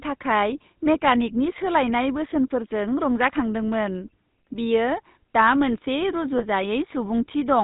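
Throughout, the speech carries plainly audible GSM full-rate codec damage. The codec models the vocal tract and drives it with a sparse, regularly spaced pulse excitation, giving a buzzy, gravelly roughness. Nothing above 4 kHz survives. The coarseness fits a 13 kbps coder.

From 6.38 to 6.44 s there are lost GSM frames, consistent with a single dropped 20 ms frame. The decoder filled the gap by repeating the last good frame's parameters, so the sound briefly holds as a short, rough, metallic ring.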